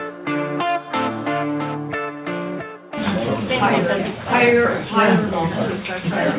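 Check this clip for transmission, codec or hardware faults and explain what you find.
Nothing stood out on listening; the sound comes across as an ordinary call path, with the expected narrowband ceiling near 4 kHz.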